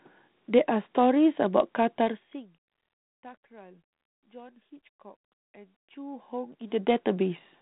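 No technical faults are audible in the speech. The telephone path sounds like G.726 ADPCM at 32 kbit/s with only light coding roughness, and the level rises and falls smoothly, like gentle fader moves.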